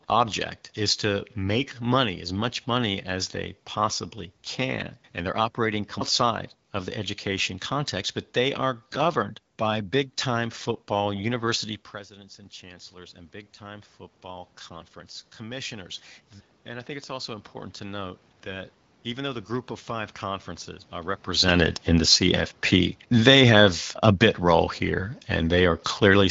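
Speech clip, and after the talker backs off the mic around 11.5 s the automatic gain rising kicks in from 12.08 to 23.77 s: the level dropped about 18 dB, so the AGC slowly pulls up about 9 dB, lifting voice and room noise together. Then the talker moves again around 21 s, and automatic gain falling runs from 21.36 to 26.26 s, easing back about 4 dB so everything sinks together. The whole thing's coming through a wideband phone path topping out near 7.5 kHz, which sounds like AMR-WB at 12.65 kbit/s with only light coding damage.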